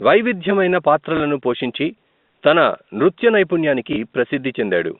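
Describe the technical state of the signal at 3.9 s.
Right around there, from 3.93 to 3.96 s, there's a short dropout patched by packet loss with the last packet repeated. About 30 ms of audio went missing, which fits a single lost packet, and the receiver filled the gap by replaying the previous chunk until fresh data arrived. That single repeat comes through as a small blip, heard against the narrow 200 to 3700 Hz telephone band of the G.711 line.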